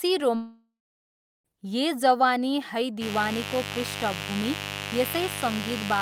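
A speech clip with two faults. From 0.35 to 1.51 s there is a long network dropout, likely from lost packets: the last sound is stretched into a fading buzz or hiss, then about 0.76 s of near-silence, and about 1.1 s of speech never returns. On a waveform this shows as a decaying tail flattening to a line. From 2.99 s to the end, mains buzz at 50 Hz sits roughly 10 dB below the speech, a raspy drone that a spectrogram shows as evenly spaced horizontal harmonic lines reaching into the kHz range.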